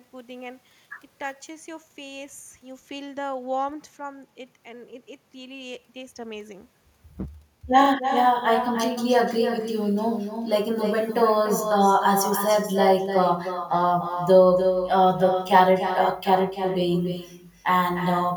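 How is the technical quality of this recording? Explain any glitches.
The recording is compromised by one continuous fault. Echo with no canceller runs throughout: the far end's loudspeaker is picked up by its microphone, returning the speech roughly a third of a second later, about 7 dB quieter and thinner. Unlike ordinary room reverberation, it is a distinct delayed repeat.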